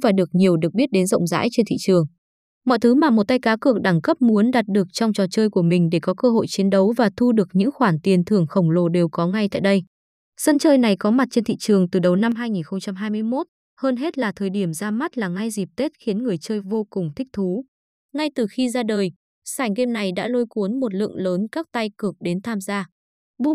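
Speech runs steadily until 12.32 s. There the level drops by about 6 dB in a single step, a sudden gain jump. The speech and the background noise fall together and stay lower to the end of the clip. Nothing fades between the two levels. The likely cause is a digital gain setting, or a one-bit shift, applied instantly with no ramp.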